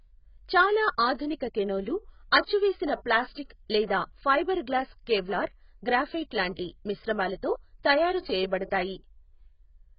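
A speech recording that was likely squeezed through AAC compression at a very low bitrate, consistent with about 12 kbps AAC-LC, for its whole length. Nothing survives above 5.1 kHz, so the sound is dull and muffled, with heavy smearing and a fizzy, warbling texture on sibilants.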